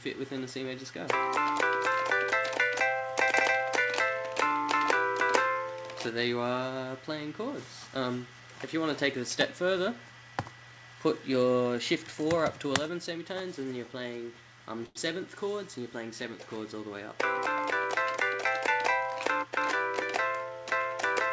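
At 14.86 s the sound hangs for a moment: whatever is playing is held and stretched until 14.97 s, with a faint buzzy, slightly dipped quality, and then carries on exactly where it left off, nothing skipped. This is a short stall from a late packet. The jitter buffer ran dry while a packet was still in transit, so the receiver extended the last sound by about 94 ms to bridge the gap, which also leaves playback running that much later afterwards.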